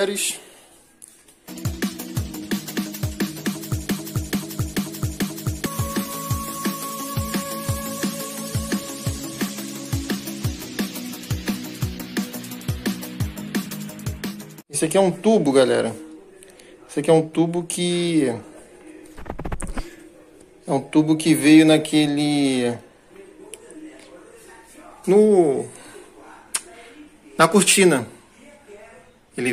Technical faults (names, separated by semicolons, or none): broken-record loop